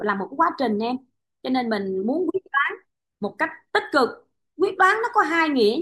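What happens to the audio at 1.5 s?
At 1.5 s the speech carries on without any audible fault: no dropout, click, distortion or other disturbance interrupts it there.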